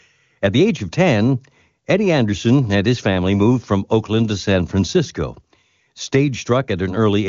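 No technical faults can be heard in this speech.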